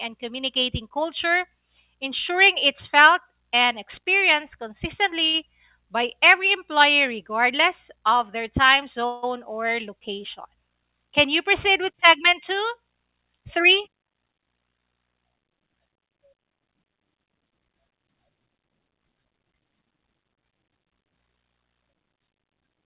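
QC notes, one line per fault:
5.26–5.36 s, short stall from a late packet: the sound at this point is held about 76 ms too long. A packet arrived after its playout time, the jitter buffer ran dry, and the receiver extended the last stretch of audio until the packet arrived, then resumed from the same spot. Nothing is lost, only delayed. On a spectrogram the harmonics run flat and unbroken for that span. The waveform shows a repeating, slightly dipping cycle before normal motion returns.
9.06–9.25 s, call audio freeze: between "regardless of their time" and "or location" the sound stops moving forward for about 169 ms and becomes a fading buzz. It never drops to silence. The likely cause is packets held up in transit, emptying the jitter buffer while the receiver continued the last sound. Playback then picks up exactly where it stopped, so a gap is inserted but no audio is missing. A spectrogram shows smeared, decaying bands capped near 4 kHz by the G.711 path. 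The waveform shows a periodic tail that shrinks in amplitude.
13.39–13.96 s, 15.97–16.58 s and 22.33–22.55 s, jitter buffer speed-up: three stretches play faster at unchanged pitch, at 106%, 110% and 115% of normal speed. Roughly 40 ms, 70 ms and 40 ms are removed in turn. The buffer was holding more audio than its target, so the receiver trimmed pitch-period-sized pieces over and over to bring the delay back down, which makes the delivery sound hurried. On a spectrogram, syllables and their transitions are compressed in time while harmonic spacing stays the same. The waveform shows periods of unchanged length with small splice points.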